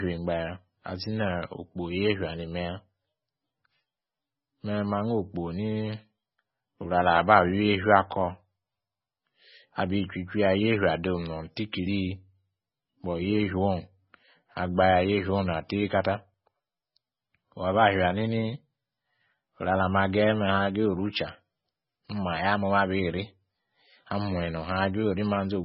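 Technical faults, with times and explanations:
Throughout, MP3 compression: nothing above 5.6 kHz and a watery, swirly quality on the speech, which fits a very low bitrate of around 16 kbps as the likely cause.
6.38 and 16.34 s, audio missing between chunks: two skips about 10 s apart where roughly 40 ms vanishes, likely lost as the recorder switched chunks and then spliced together.
11.72 s, pre-echo: a brief hiss about 11 ms long ahead of a sharp attack, as codec noise spreads backward into the quiet moment before it.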